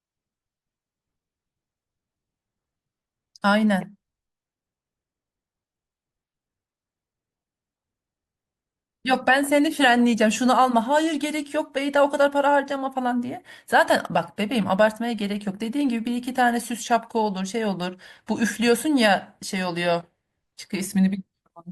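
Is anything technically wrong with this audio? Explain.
No, nothing technically wrong stood out on listening to this recording.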